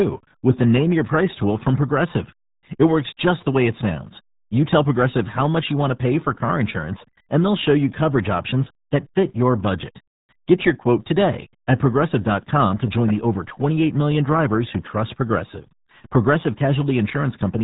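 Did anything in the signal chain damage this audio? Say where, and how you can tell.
Yes, at the codec stage: the speech carries RealAudio 14.4 codec damage from start to finish. Nothing passes above about 3.8 kHz, and the voice sounds muffled and gargly, which fits a heavily compressed 8 kbit/s RealAudio 1 stream that discards upper bands and coarsely quantises the rest.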